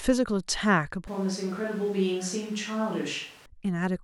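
A switch to a distant microphone runs from 1.08 s to 3.46 s. At 1.08 s the speech abruptly turns hollow and roomy, loses its low end and drops by roughly 5 dB. Room noise becomes audible about 25 dB below the speech. The likely cause is that the close microphone's feed dropped out and a more remote pickup carried the signal. At 3.46 s the close, full sound returns just as suddenly.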